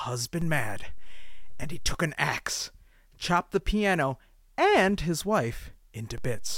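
A DC step runs from 0.42 to 1.95 s in this speech clip, just before "an axe chopped the", and again from 6.18 s to the end. Each time the waveform's zero line shifts by about -29 dBFS, as when a converter recalibrates or an offset input is switched in, causing a low thump or click while the speech continues unchanged.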